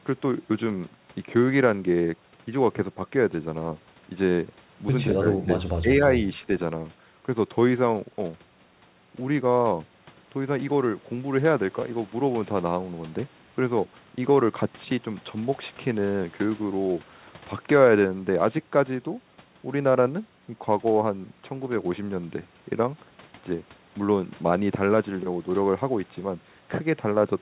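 From 5.13 to 6.01 s the speech level dips, by around 10 dB at worst and for about half a second in total, with a shallower dip of roughly 5 dB at 6.38 to 6.48 s. This is likely speech suppressed in double talk, where the echo canceller mistook the talker for loudspeaker echo during overlap. The band stops at 4 kHz throughout, which fits a G.711 call path.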